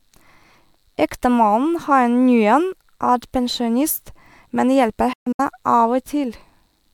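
At 5.13 s, just after "er pensjonist men hjelper", the speech cuts out in a digital broadcast dropout lasting until about 5.40 s. The receiver stopped getting valid frames and muted, fading down over about 8 ms rather than clicking. Within that 256 ms window about 192 ms of audio is missing, in short holes rather than one gap, the longest about 128 ms. The pattern fits several lost frames of around 32 ms each. The missing audio is gone, not delayed.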